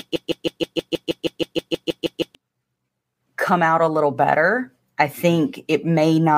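A speech clip, caught in a broken-record loop from the very start. The fault is already under way when the audio begins. A fragment of about 0.16 s repeats exactly, back to back, some 14 times. It ends at 2.35 s, when normal speech resumes. The likely cause is a stalled player, encoder or stream that kept resending the last piece it held. Whatever should have played during those first 2.35 s is gone.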